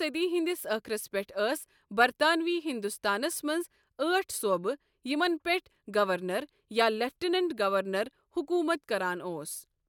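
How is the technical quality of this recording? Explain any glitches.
The technical quality of this recording is sound, with no glitches to explain.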